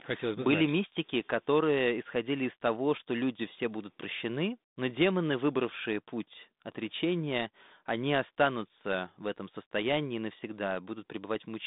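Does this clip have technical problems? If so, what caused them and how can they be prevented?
No, nothing here counts as a technical problem, since what you're hearing is just a normal G.726 ADPCM phone path at 32 kbit/s, which narrows the sound to roughly 150 Hz to 3.7 kHz and adds only the light graininess that rate normally brings, so there's nothing that needs preventing.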